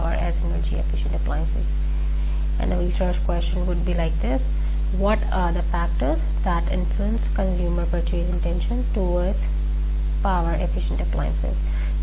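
Nothing in the audio stands out as a technical fault. No event at any point calls for comment.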